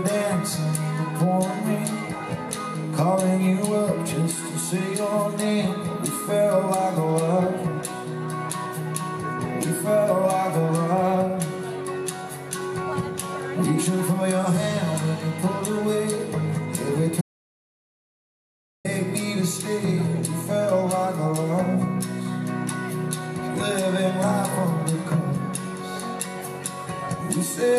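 A single audio dropout to silence runs from 17.21 to 18.85 s: about 1.6 s of silence, no room tone, likely a lost input link or mute.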